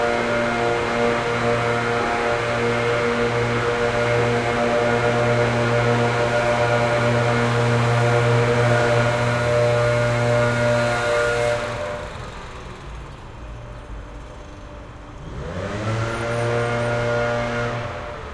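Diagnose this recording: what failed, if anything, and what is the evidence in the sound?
Nothing in the chain failed: the sounds reach the output as one continuous signal, with no break, level jump or added noise that would point to a problem at any stage.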